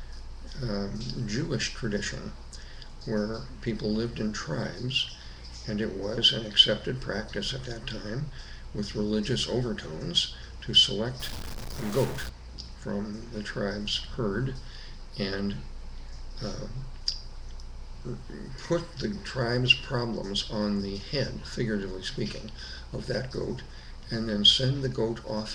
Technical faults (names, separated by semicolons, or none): stuck bit